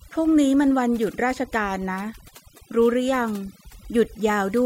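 A noise reduction stage pushed far too hard has left this speech recording with overdone noise removal from start to finish. The processor is gating individual frequency bands down toward nothing wherever their level sits close to what it judges to be noise, and it catches the softer parts of the voice in the same net. Between phrases the background collapses into near silence dotted with twinkling specks.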